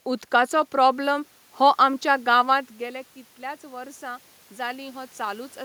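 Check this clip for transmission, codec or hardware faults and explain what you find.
One fault stands out, an automatic gain rising, from 2.79 s to 5.6 s, just after "प्रॉब्लम हो आमच्या गांवांत". The speech and the room noise behind it swell together, slowly. The talker moved away around 2.5 s, dropping the input by about 15 dB, and the automatic gain control responded by gradually raising its gain by about 6 dB.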